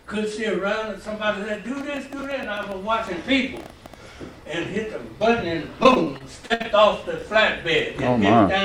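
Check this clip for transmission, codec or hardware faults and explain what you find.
Three kinds of fault turn up: a burst of clicking, two short out-of-order jumps, and a stretch of choppy, robotic dropouts.

Train of clicks, 1.81 to 3.95 s: about fifteen sharp pops at an irregular pace of roughly 7.5 per second, peaking about as loud as the sound itself. The likely cause is electrical interference or a struggling interface injecting pulses. They look like thin vertical spikes on the waveform and full-height vertical lines on a spectrogram.

Chunks out of order, at 2.19 s and 7.19 s: 10 ms segments played two and then three positions late, so the audio briefly jumbles. Each creates hard joins. On a waveform these show as abrupt discontinuities. On a spectrogram they appear as broadband vertical slashes with a misplaced sliver of content.

Repeated packet loss (robotic sound), 5.83 to 6.66 s: eight holes, the longest 62 ms, with concealment stretching the previous sound over roughly a quarter of the span. 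The result is choppy, with pieces missing. The spectrogram shows smeared, frozen harmonic bands, and the waveform shows repeated cycles.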